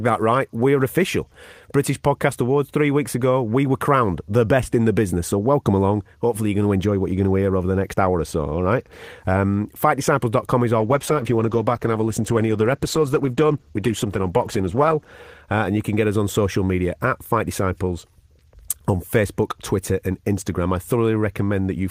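Just after "is our", at 10.81 s, the speech turns coarse and rough-edged as a call bitrate drop takes hold. The encoder has been starved of bits, which fits a fall from about 32 kbps to around 13 kbps, so detail is coded crudely and the top end is trimmed. Unlike packet loss, nothing drops out or stutters. The degradation is continuous and steady for roughly 4.3 s, then clears at 15.19 s.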